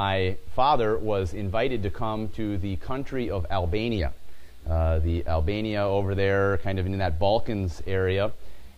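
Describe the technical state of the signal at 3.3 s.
At 3.3 s the signal is intact, with no audible fault at that point.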